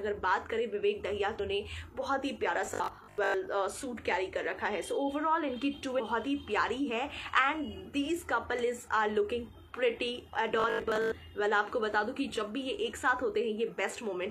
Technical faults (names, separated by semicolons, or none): damaged data in a compressed stream; robotic sound from repeated short buffers